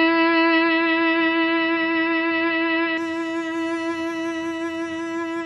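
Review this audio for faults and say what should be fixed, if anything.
From the start until 2.98 s the music is dull and boxy, with nothing above 5.2 kHz, then at 2.98 s it opens up to full bandwidth with no gap. The likely cause is an input switched to a poorer device. The band change comes with a level step of about 5 dB and a different faint background noise, well below the music. A codec or filter bandwidth drop would not shift level and noise character together like this. To prevent it, lock the recording input to the intended microphone so the system cannot change devices mid-take.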